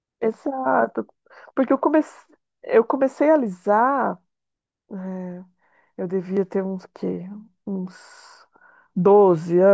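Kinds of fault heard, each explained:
No faults turn up anywhere in this bit of speech, so there's nothing to list here.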